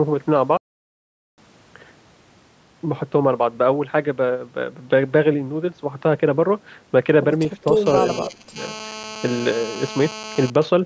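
At 0.57 s the speech just drops out and there's dead silence until 1.38 s, a gap of about 0.81 s, before it picks up again. That reads as a playback stall: the player most likely ran dry of data or had its thread held up, so nothing reached the output until it caught up. It's a clean hole in the middle of the flow rather than a fade or a glitchy stutter.

From 7.86 s through 10.50 s there's a hard, raspy buzz sitting under the speech, pulsing at about 217 Hz with a stack of harmonics above it and no relation to what's being said. That's classic GSM phone buzz: a 2G handset close by is transmitting in bursts about 217 times a second, and the audio circuitry is rectifying those radio pulses into the signal. It stays nearly steady, which fits a phone in an active call, and it sits about 13 dB below the speech.

Inside that buzzy stretch, between 8.24 s and 8.57 s, the speech itself dips hard, by something like 20 dB at the worst point, over roughly 300 ms. 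That looks like speech suppressed in double talk: both ends were likely talking at once, and the echo canceller, unable to tell this talker from the returning loudspeaker echo, pulled the level down on both. The missing lowest bass comes from the call's microphone processing, which is normal.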